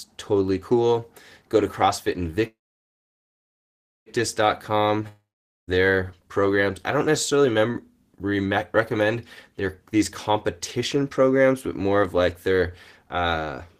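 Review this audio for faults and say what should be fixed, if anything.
Call audio freeze, 2.47 to 4.09 s: the sound in progress is carried on briefly and then gives way to about 1.5 s of silence. Speech resumes exactly where it stopped, so nothing is lost, but everything after arrives about 1.59 s late. Likely cause: packets held up in transit, emptying the jitter buffer.

Long network dropout, 5.08 to 5.76 s, just before "programs I": the last sound is stretched and fades into about 0.46 s of silence. About 0.6 s of speech never comes back, and the audio picks up further on. This likely reflects a stretch of network loss where no packets reached the receiver.

Short stall from a late packet, 7.72 to 7.77 s: one packet missed its playout time, so the receiver held the preceding sound for an extra 17 ms until it arrived. Playback then continued from the same point with nothing missing, only that brief stretched sound.

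To fix these, stabilise the network path (prioritise call traffic, avoid congested or lossy links) and use an adaptive jitter buffer with packet loss concealment and forward error correction so late or lost packets are absorbed rather than heard.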